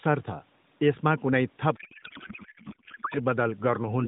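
From 1.76 s to 3.19 s the speech gives way to garbled noise and warble that barely tracks what was being said, which is a codec payload misread. The AMR frames were packed octet-aligned but read as bandwidth-efficient, so the decoder pulled its parameters from the wrong bit positions and rebuilt nonsense for about 1.4 s. Around it the narrowband AMR sound is only lightly damaged and band-limited, which fits a 12.2 kbps mode.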